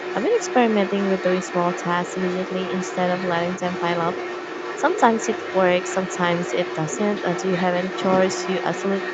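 From the start of the speech to the end, about 9 s in all, a second voice sits under the main talker at around 10 dB lower. This is the other side's voice leaking through, likely because the echo canceller left part of the loudspeaker playback in the microphone signal. On a spectrogram it shows as a fainter, separate set of harmonic bands overlapping the main ones, all stopping at the 8 kHz band edge.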